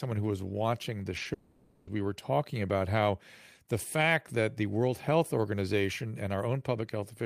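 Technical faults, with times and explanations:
1.17–1.21 s and 1.23–1.27 s, short concealed packet loss: two quick smears in the speech, about 20 ms each. Each time a small piece of audio arrived too late, and the receiver bridged the gap by extending the preceding sound before blending back into the real signal.
1.33–1.89 s, long network dropout: the speech gives way to a continued, fading buzz or hiss extending the last sound, lasting about 540 ms, with no silent stretch, then resumes further on with that portion gone. The likely cause is a network outage, with the receiver synthesising audio to fill the entire gap.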